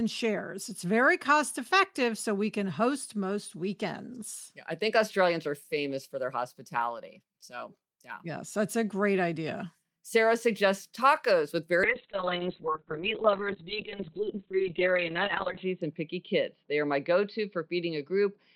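At 11.84 s the call's bandwidth estimate falls and the encoder is pushed to a far lower rate, a call bitrate drop consistent with a fall from about 32 kbps to around 6 kbps. The coding becomes much coarser and the audio band narrows from 20 kHz to 4 kHz, so the speech turns muffled and rough, with a watery edge. The degradation sits at its worst for about 3.8 s and does not recover before the clip ends at 18.56 s.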